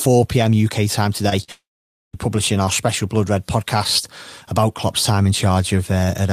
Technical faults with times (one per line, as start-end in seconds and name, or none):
1.29-1.33 short concealed packet loss
1.43-1.50 burst of packet loss
1.52-2.15 long network dropout